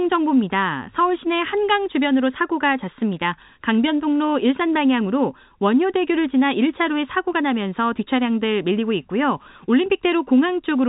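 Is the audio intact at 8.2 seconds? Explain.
Yes, the audio is intact at 8.2 seconds, with nothing there beyond the narrow telephone band of the G.711 coding, which passes nothing above about 3.8 kHz.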